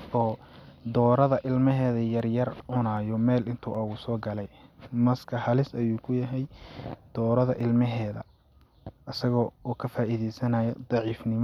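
From 0.66 s to 10.69 s the speech carries a regular tick roughly every 0.77 s, about fifteen in all, consistent with clock drift buffer slips. Two independently clocked devices likely disagree by something near 200 ppm, so their buffer drifts until around seven samples are dropped or repeated. On a spectrogram each slip is a thin vertical broadband line at that steady spacing; on the waveform, a small step where the signal jumps discontinuously.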